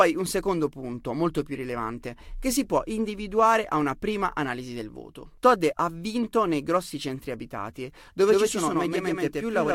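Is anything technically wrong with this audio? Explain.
Yes. Two kinds of fault can be heard in this speech clip.

A corrupt frame decoded appears three times: 1.54 to 1.56 s, 4.10 s, and 5.72 to 5.76 s. Each spans one or two compressed frames. Damaged bits were decoded anyway, so wrong gains and misread codes put energy in the wrong frequency bands. Each one is a brief glitch of misplaced sound. The error peaks near -30, -25 and -35 dBFS, so the middle one is loudest.

A doubled audio track starts abruptly at 8.28 s and runs to the end. A second full-band copy trails the original by roughly 150 ms, at about the same level. It has no decay and no room colour, so it sounds like a hard slapback rather than an echo. The likely cause is the same signal arriving again through a slower path, or an edit holding two offset copies.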